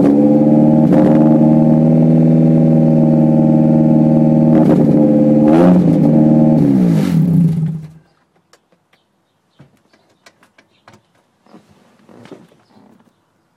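No technical faults are audible.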